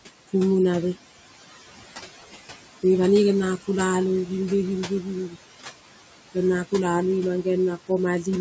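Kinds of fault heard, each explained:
Noise suppressor artifacts: The suppressor treats steady background as noise and pulls those bands down by about 15 dB frame by frame, so the room noise sinks in the pauses and rises again under the speech.
Speech cut by the noise suppressor: The suppressor mistook parts of the speech for noise and turned them down with the background, by about 7 dB from 4.87 to 5.07 s and about 11 dB from 5.28 to 5.37 s, so brief stretches sound swallowed and faint.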